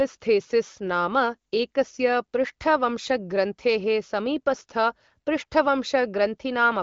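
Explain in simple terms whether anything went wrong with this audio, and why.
Nothing went wrong with this speech recording.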